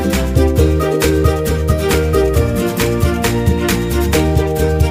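No technical faults can be heard anywhere in the audio.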